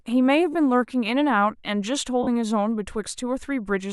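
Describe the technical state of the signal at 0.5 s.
At 0.53 to 0.55 s the speech briefly breaks up from lost LE Audio frames. For about 20 ms, consistent with two 10 ms LC3 frames going missing, the decoder had no fresh data and repeated the last good spectrum with randomised phase signs. Because the gap is so short, the concealment never reaches its fade-out stage. Instead it leaves a brief noisy smear in place of clear tonal detail before normal decoding resumes. The light lossy compression elsewhere in the signal leaves no distinct mark at this point.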